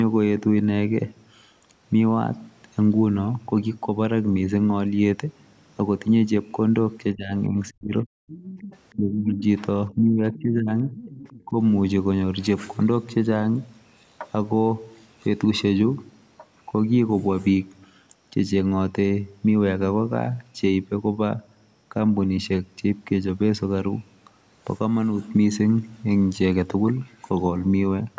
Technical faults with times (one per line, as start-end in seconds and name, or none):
7.13-8.08 speech suppressed in double talk
7.67-7.72 other side's voice leaking through
8.28-8.96 other side's voice leaking through
8.96-9.45 speech suppressed in double talk
9.90-10.97 speech suppressed in double talk
10.31-10.42 other side's voice leaking through
10.91-11.43 other side's voice leaking through
11.46-11.56 speech suppressed in double talk